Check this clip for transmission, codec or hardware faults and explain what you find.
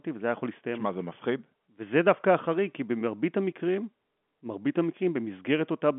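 No faults turn up in the speech, which carries the narrow telephone band of G.711 A-law coding, roughly 200 Hz to 3.4 kHz with nothing above 3.8 kHz and only faint quantisation noise, consistent with a 64 kbps fixed-line path.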